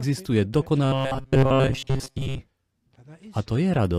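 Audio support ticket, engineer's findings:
Robotic sound from repeated short buffers, 0.85 to 2.40 s. Speech collapses into a rigid metallic buzz near 134 Hz, still loosely tracking the words. Probable component: audio buffering, likely starved. A roughly 7.5 ms segment loops in place of the real audio, replacing most of it.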